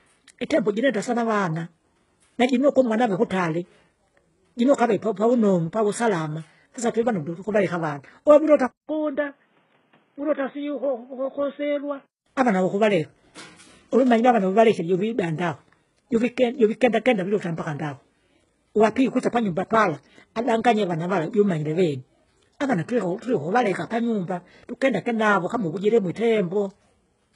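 From the start, the whole clip carries heavy HE-AAC compression damage. The rate likely sits near 12 kbps. Nothing reaches above 11 kHz. The treble is rebuilt from copied lower bands, so its harmonics fail to line up with those below.

At 8.67 s, after "twevandundu tukavaleka avana webulota", a 200 ms silence falls. The input has likely switched to a poorer device. Until 12.26 s the sound is dull, capped at 3.8 kHz, about 5 dB quieter, with new noise about 35 dB down. It clears before "avana vukuvaleka".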